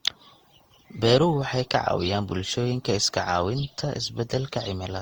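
Across the whole speech clip the sound is swirly and smeared, with a hollow, watery quality and softened consonant attacks, more degraded than a single pass at a moderate rate would leave it, though content still reaches about 20.2 kHz. This is generation loss, likely from the audio being decoded and re-encoded around seven times with Opus at a rate near 48 kbit/s, each pass quantising on a shifted frame grid so noise accumulates.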